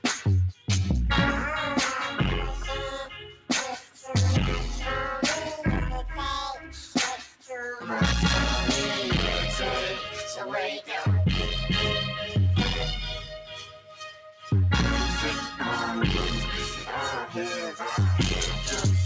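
A speech-tuned noise suppressor stays active across the whole clip and treats steady, sustained sound as noise. Its gain keeps shifting by around 5 dB, so held material and decays pump and thin out while sharper onsets pass mostly intact. On a waveform the envelope breathes unevenly under sustained passages, and on a spectrogram the tails fade early and band energy flickers. The audio sits within a band ending at 8 kHz, which fits a wideband call codec such as G.722.

Four spots show the sound cut by the noise suppressor more heavily. At 0.53 to 0.68 s the level sinks by about 9 dB, and at 3.11 to 3.5 s by about 12 dB. At 6.58 to 6.76 s it drops about 6 dB, and the longest cut, 13.19 to 14.51 s, reaches about 12 dB. Each sounds like the sustain suddenly ducking away. They appear as carved-out dips in the waveform envelope and as darkened, truncated patches on the spectrogram.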